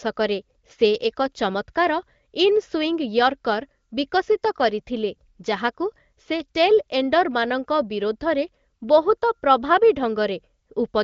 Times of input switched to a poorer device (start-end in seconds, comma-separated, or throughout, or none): none